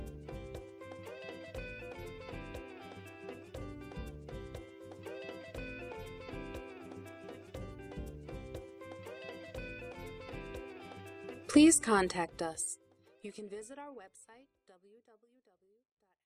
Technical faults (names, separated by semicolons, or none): none